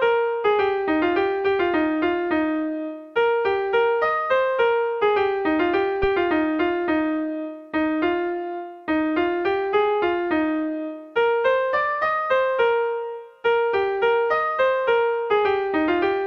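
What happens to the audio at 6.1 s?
A supply, most plausibly phantom power, switches on or off on a live input at 6.04 s, and the voltage step passes through the coupling capacitors. The result is a phantom power thump: a deep low thud peaking near about -15 dBFS, decaying within 12 ms and gone by 6.09 s.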